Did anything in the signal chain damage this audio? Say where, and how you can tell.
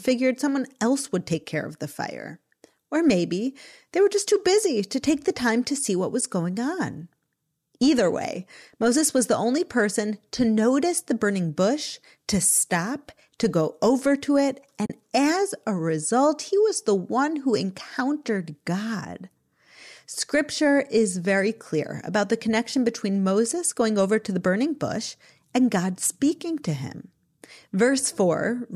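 Yes. The damage sits between network and codec: AAC frame loss with muting. At 6.21 s the sound sinks into a brief dip, and from 14.86 to 14.90 s a longer one, about 40 ms, points to a run of roughly four 10 ms frames. The decoder, likely low-delay AAC, zeroed the missing spectra, and overlapping windows faded each edge. A buffer underrun or sample dropout would cut off hard and click.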